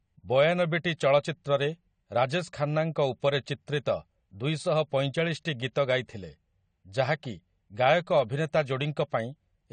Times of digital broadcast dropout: none

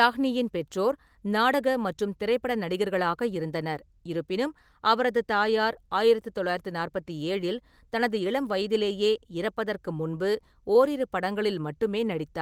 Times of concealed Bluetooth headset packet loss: none

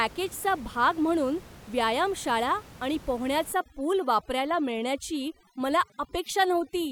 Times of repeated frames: none

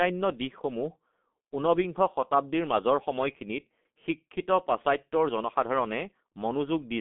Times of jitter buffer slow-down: none

